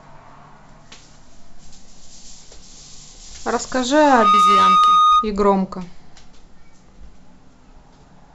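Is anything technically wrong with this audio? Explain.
Yes. From 4.01 to 5.31 s there is loudspeaker feedback squeal. The microphone picks up its own loudspeaker, and at 1.2 kHz the loop gain exceeds unity, so that tone keeps feeding itself. Unlike a steady interfering tone, it swells within about a third of a second to roughly 10 dB above the speech.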